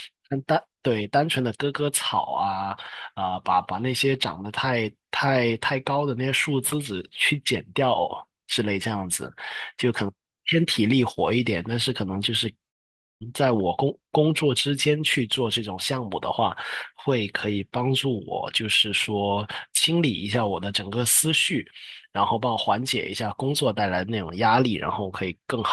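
At 12.69 s the speech breaks into a smeared buzz that fades to near-silence, returning at 13.23 s with about 0.52 s lost, likely a long network dropout. The spectrogram shows decaying, stretched bands into a dark gap; the waveform tapers to flat.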